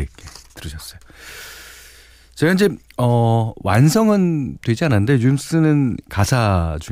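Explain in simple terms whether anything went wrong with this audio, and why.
Nothing went wrong here; the speech comes through steady and intact the whole way, with no glitches, dropouts or odd sounds to point to.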